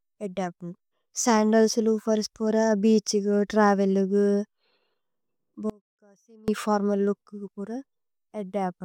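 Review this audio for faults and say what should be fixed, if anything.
From 5.70 to 6.48 s, an audio dropout to a faint residue cuts the speech for 0.78 s, leaving a faint leak about 25 dB down, likely from a brief upstream signal loss. The waveform collapses to a thin band, and the spectrogram shows a dim block with hard vertical edges. Secure connections and monitor the input feed during recording so interruptions are caught and retaken.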